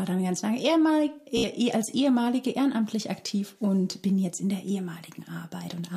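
The audio has a Bluetooth stutter from 1.37 to 1.46 s: for about 90 ms a short slice of sound repeats several times in quick succession, giving a brief buzzing, machine-gun stutter. When the sound resumes, it has skipped ahead as though it had kept playing. This fits packets arriving late or not at all over the wireless link, with the receiver replaying its last buffer until fresh data came. The gap points to roughly 60 ms of audio lost.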